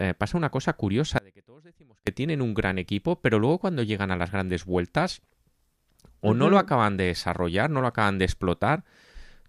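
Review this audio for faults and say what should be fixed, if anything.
Audio dropout to a faint residue, 1.18 to 2.07 s: the speech cuts off abruptly, unlike a gradual pause or fade, leaving only a faint leak about 30 dB down, likely from a momentary break in the signal path. Secure the cables and connectors and monitor the input chain during recording so that brief interruptions are caught and retaken.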